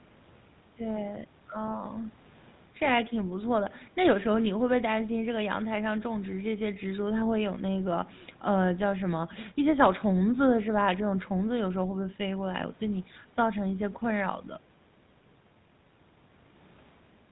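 Throughout the clip, the speech carries the plainly audible buzzy, gravelly roughness of the GSM full-rate codec. It rebuilds the voice from a vocal-tract model driven by coarse pulses. Nothing above 4 kHz survives. The sound fits the 13 kbps full-rate mode.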